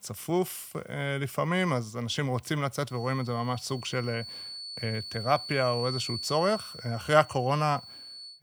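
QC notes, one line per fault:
2.85–8.43 s, feedback whistle: a thin, steady tone at 4.4 kHz sits roughly 15 dB beneath the speech and continues to the end, swelling and fading slowly in level. The likely cause is a loudspeaker-to-microphone loop poised at the edge of feedback, sustaining one frequency without escalating.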